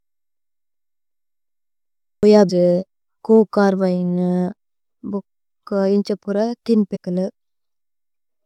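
Speech, with two kinds of fault. From 0.37 to 2.23 s there is a system hang loop. One 0.37 s slice of audio repeats exactly, five times. The loop rate is 2.69 Hz, so it sounds like a slow, mechanical stutter rather than a buzz. The length fits a 16384-sample ring buffer that kept playing while the system froze. About two seconds of the real audio never arrive. Then comes damaged data in the compressed stream. There is a brief blip from 2.49 to 2.51 s, and another from 6.95 to 6.97 s. At those points the decoder hit corrupted frames, lost sync, and had to find the next valid frame header.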